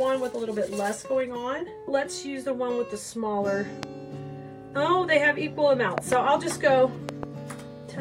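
A loud pop cuts into the sound three times: a single pop at 3.83 to 3.85 s, then a double pop from 5.98 to 6.15 s and another from 7.09 to 7.25 s. The first two events jump roughly 20 dB above the surrounding level, and the last about 15 dB. The sound carries on underneath each one. The waveform shows narrow spikes, and the spectrogram shows thin full-height vertical lines. These are likely voltage pulses from a plug, switch, static or driver glitch.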